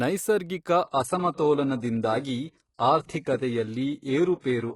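Speech, with an adaptive stream dropping to a lower bitrate from 0.84 s to the end. With no gap, the sound abruptly turns thinner and more artefact-laden, which fits a switch from a high-quality AAC stream to a very low-bitrate HE-AAC one after the connection slowed. On a spectrogram, all energy above 11.5 kHz vanishes at 0.84 s, leaving a hard ceiling. The waveform stays continuous, with no dropout at the switch.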